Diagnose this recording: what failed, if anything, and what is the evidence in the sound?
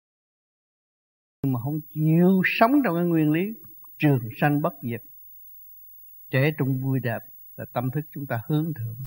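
A cut-off start. The file holds digital silence from 0.0 to 1.44 s. At 1.44 s the sound appears abruptly, already in progress, with no attack or fade-in. The fault sits at the capture or stream start stage: recording began late, entering mid-sound.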